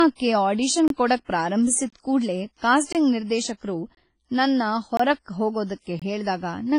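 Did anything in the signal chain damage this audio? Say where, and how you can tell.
Yes. The sound is dull with nothing above 10.1 kHz, a ceiling that a file at this bitrate wouldn't impose. This is likely low-bitrate audio saved at a high bitrate at the codec stage, such as a roughly 24 kbit/s WMA re-encoded to MP3. The cutoff and artefacts survive because re-encoding cannot restore removed content.

There is a gap between chunks at 0.88, 1.90, 2.93, 3.95, 4.97 and 6.00 s. Each is a hole of about 23 ms, repeating every 1.0 s, at the buffer or playback stage. Silence is inserted at each chunk join.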